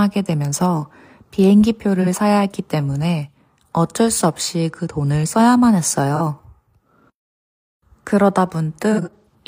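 AAC frame loss with concealment occurs at 2.01–2.07 s and 6.15–6.21 s. Each 43 ms gap, fitting one lost frame, is refilled from the previous spectrum and sounds smeared and phasey, showing as blurred, flattened harmonics. From 8.93 to 9.34 s, 213 ms is lost in total, with the longest stretch around 150 ms. There the sound fades toward silence, and the waveform dips sharply.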